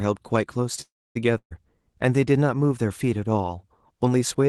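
At 0.81 s the sound stalls for about 0.36 s, until 1.17 s. The last bit gets stretched into a fading buzz or hiss, then roughly a quarter second of near-silence, and then it picks up exactly where it left off. Nothing's lost, but everything after lands about 0.34 s later. That's a call audio freeze, likely from packets getting held up in transit so the jitter buffer ran dry and the receiver had to pad the gap.

Shortly after, from 1.37 to 1.53 s, there's a burst of packet loss. About 140 ms of audio never makes it. The receiver fills the hole by carrying the last sound forward as a decaying buzz or hiss for around 130 ms, dipping to silence for the last stretch. Then it jumps ahead, so that chunk is simply gone. The Opus coding underneath, with its top end stopping around 12 kHz, fits a low-bitrate call setting near 20 kbps.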